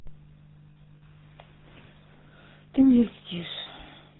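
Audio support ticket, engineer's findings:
GSM full-rate codec, whole clip. Speech passed through the original GSM coder, consistent with 13 kbit/s full rate. Vocal tract modelled, excitation reduced to sparse regular pulses, nothing above 4 kHz. Result: plainly audible buzzy, gravelly roughness on the voice, dull top end.

Lost GSM frames, 0.70–1.03 s. Frame losses scattered across roughly 320 ms, about 200 ms missing in total, which points to around ten 20 ms frames. Longest gap under a tenth of a second. Decoder repeats the last good frame, giving intermittent rough, metallic ringing.

Lost GSM frames, 3.60–3.67 s. About 60 ms missing, fits three frames. Same concealment: last good frame held, heard as a short metallic smear.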